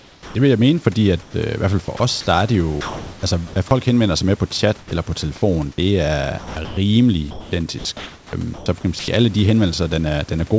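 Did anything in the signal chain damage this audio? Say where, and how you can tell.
Yes. The damage sits in call processing, at the voice detector and discontinuous-transmission stage.

Comfort noise in place of the background appears at 0.00 to 0.35 s and 1.22 to 1.34 s, between "vil jeg mene fordi" and "øh i hvert fald". The real background becomes steady, featureless hiss, about 4 dB quieter in the first stretch. The likely cause is the sender pausing transmission while the receiver synthesises filler noise.

Sound dropped by the voice detector occurs at 1.97 to 2.00 s, after "i hvert fald for" and before "der er det", and at 4.79 to 4.91 s. There, about 60 ms of speech vanishes. Speech gives way to flat noise, then returns. The likely cause is part of the speech being judged as background.

Sound chopped by the voice detector covers 2.81 to 3.56 s, 6.38 to 6.77 s, and 7.31 to 9.08 s, ending before "alle de". 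The speech drops out more than once in each stretch, replaced by comfort noise. The likely cause is the detector toggling between sending and not sending.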